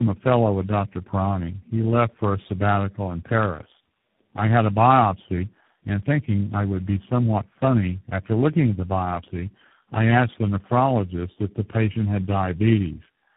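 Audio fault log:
throughout: tandem speech coding. Four speech codecs in a row each re-encode the previous damage. Speech sounds rough, muffled and warbly, with nothing above 3.9 kHz.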